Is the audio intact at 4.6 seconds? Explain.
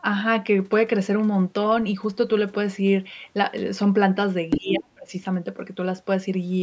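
No. From 4.5 to 4.59 s, the other side's voice is leaking through: a brief scrap of a second voice, roughly as loud as the talker, most likely far-end audio from the device's loudspeaker that the echo canceller failed to remove from the microphone. Unlike crosstalk or a noisy background, it is recognisably another voice, and it lasts only a fraction of a second, overlapping the start of the next fault.

From 4.57 to 5.13 s, the talker's speech is suppressed in double talk. The voice sinks by about 30 dB over roughly half a second, which fits an echo canceller likely treating both sides as echo while they overlap and turning everything down. This is different from a dropout or packet loss, which leaves clean gaps of silence. Here the talker is pushed down only while the far side's sound is playing on the loudspeaker.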